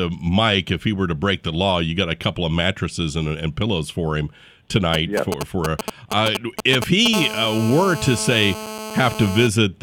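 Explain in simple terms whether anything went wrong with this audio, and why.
Two kinds of interference from a nearby mobile phone cut into the speech. From 4.94 to 7.08 s, GSM signalling bursts come through as a galloping dit-dit-dit of short buzzes. They stop and start because the phone is only briefly signalling. From 7.14 to 9.48 s, a steady GSM phone buzz follows: an unbroken, raspy hum pulsing about 217 times a second, the sign of a phone in an active call.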